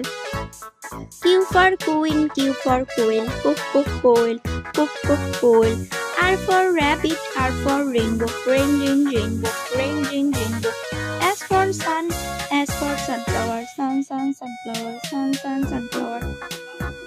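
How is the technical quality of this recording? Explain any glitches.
No glitches or technical faults can be heard here.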